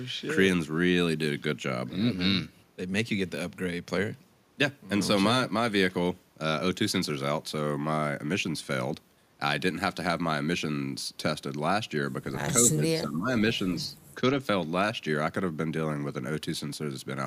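At 12.64–13.44 s and 14.15–14.21 s, speech dips up to about 15 dB, likely speech suppressed in double talk; waveform and spectrogram show dimmed stretches.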